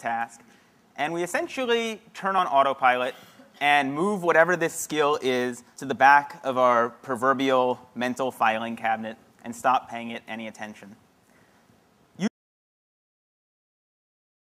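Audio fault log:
12.28–14.42 s, audio dropout to silence: the sound stops abruptly at 12.28 s and never returns, leaving about 2.1 s of silence through to the end, with no room tone or noise floor underneath. The likely cause is a lost input, such as a disconnected device or failed link, while recording continued writing silence. On a waveform the trace collapses to a flat line; a spectrogram shows a sharp vertical edge followed by darkness across all frequencies.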